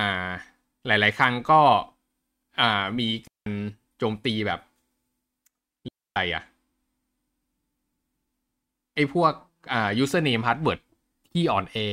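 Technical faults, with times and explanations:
3.27–3.46 s and 5.88–6.16 s, digital wireless dropout. The receiver mutes briefly, about 190 and 280 ms, leaving clean near-silent gaps with no noise bursts.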